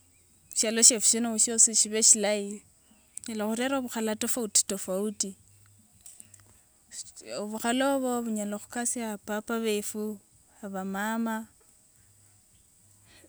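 Nothing goes wrong anywhere in this bit of speech, so there's no fault to point to at any moment.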